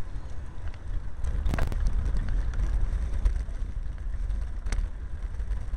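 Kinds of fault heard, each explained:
Processor overload crackle: the processor fell behind and skipped dozens of tiny buffers in a row, leaving a gritty crackling tear from 1.49 to 1.72 s.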